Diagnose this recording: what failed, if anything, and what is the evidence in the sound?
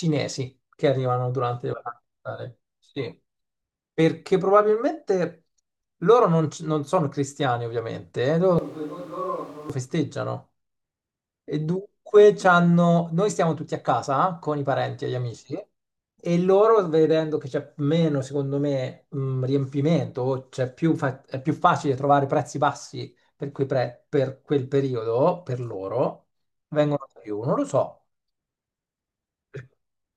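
The close microphone's signal likely dropped out at the analogue wiring stage, leaving a switch to a distant microphone from 8.59 to 9.70 s. The speech turns suddenly roomy and thin, falls roughly 10 dB, and room noise rises to around 20 dB below it before snapping back.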